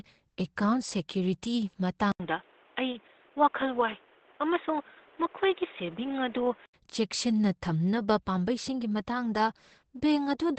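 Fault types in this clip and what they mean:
Opus compression: The whole clip sounds muffled and hoarse, with heavy codec damage and nothing above 8.7 kHz. This points to Opus's speech (SILK) mode. It likely comes from a very low rate, which fits about 12 kbps.
Input switched to a poorer device: From 2.12 to 6.74 s the sound turns dull and boxy, with nothing above 3.8 kHz. An 80 ms silence marks the change. Level drops a few decibels, and new background noise sits well below the signal. A switch to a poorer input device is the likely cause.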